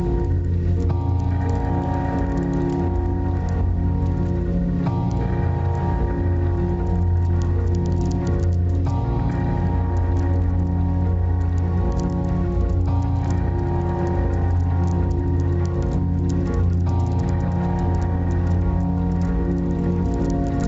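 Gain pumping runs through the whole clip. The gain swings by roughly 5 dB, so loud and soft passages sit close in level and the sound feels squashed. The likely cause is input gain set far too high, with a fast limiter clamping down. A waveform shows a flattened envelope and a noise floor rising between peaks. On the spectrogram, which is empty above 8 kHz from the call path, the background brightens in the gaps.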